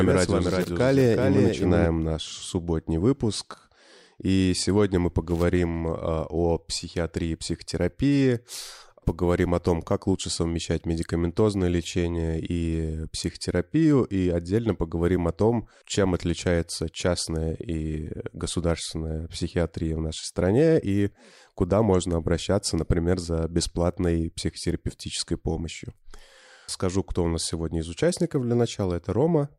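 A doubled audio track runs from the start of this speech clip until 1.86 s, just before "наш субботний выпуск". A full-band copy trails about 0.4 s behind, roughly 5 dB quieter, with no reverberant tail, and it stops abruptly. The likely cause is a second, slower capture path or a misaligned edit mixing the same audio in twice.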